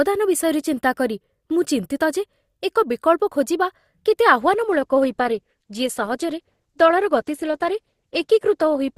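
At 4.41 s the speech switches abruptly to an adaptive stream at a lower bitrate, with no gap, and stays there to the end. The player evidently dropped to a cheaper rendition when throughput fell; the change fits a step from Opus at around 64 kbit/s to about 12 kbit/s. Nothing is present above 12.1 kHz, so the treble is dulled, and codec artefacts become noticeably more prominent for the remainder.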